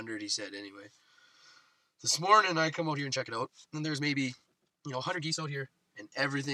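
From 2.85 s to 5.69 s the pace abruptly jumps to about 1.71 times normal speed, sounding rushed while the pitch stays unchanged. This is likely a time-stretched section, where software squeezed that stretch of audio by dropping short pieces to preserve pitch.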